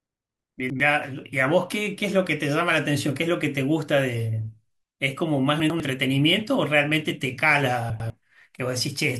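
A speech clip with chunks out of order at 0.6–0.8 s, 5.6–5.8 s and 7.9–8.1 s. Each time, a 100 ms chunk arrives one chunk late and swaps places with its neighbour, producing a brief garbled stutter. On a waveform or spectrogram, each event shows three hard vertical seams where the contours jump discontinuously.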